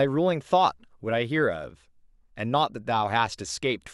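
No technical faults can be heard anywhere in the recording. The speech runs from beginning to end without any interruption or disturbance.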